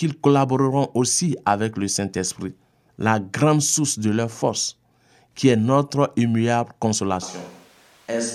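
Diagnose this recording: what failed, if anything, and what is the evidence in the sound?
A switch to a distant microphone at 7.23 s, lasting to the end: the speech abruptly turns roomy and hollow, thinner in the bass, about 5 dB quieter, with room noise only some 25 dB below it. At the capture stage, the close microphone's feed likely dropped, leaving a farther pickup.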